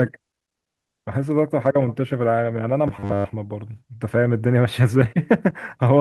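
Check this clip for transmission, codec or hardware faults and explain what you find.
One fault turns up: robotic sound from repeated short buffers, from 2.88 to 3.34 s. The speech becomes a rigid metallic buzz at 100 Hz that only loosely tracks the words. The likely cause is late-arriving audio being covered by replaying the last 10 ms or so through most of that stretch. A spectrogram shows flat, evenly spaced harmonics at multiples of 100 Hz, and the waveform shows one short cycle repeating identically.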